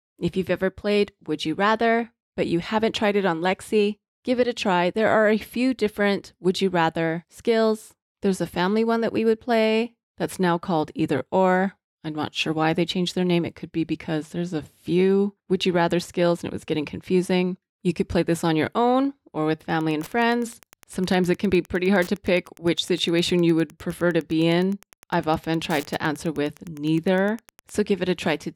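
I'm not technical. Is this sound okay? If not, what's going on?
No. From 19.72 to 27.72 s, just after "your own or with", faint Wi-Fi interference ticks steadily about ten times a second. That even rhythm comes from a nearby Wi-Fi radio, unlike random crackle.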